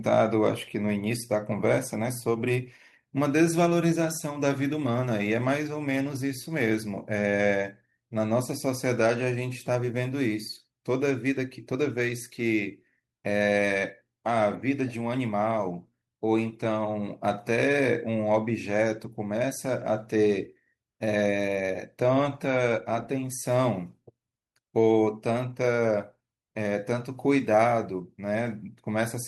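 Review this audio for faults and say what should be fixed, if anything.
Nothing stood out on listening to this speech recording, so there is nothing here that needs fixing.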